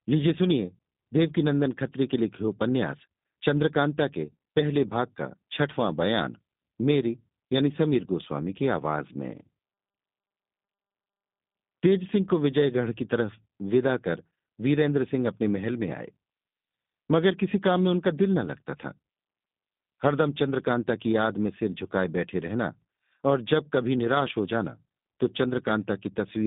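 Throughout, the speech sounds rough and synthetic with nothing above 3.7 kHz: G.729 codec damage, each 10 ms frame rebuilt from a filter and few pulses.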